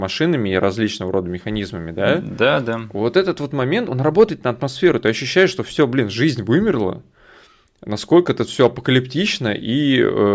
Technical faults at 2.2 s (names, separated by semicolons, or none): none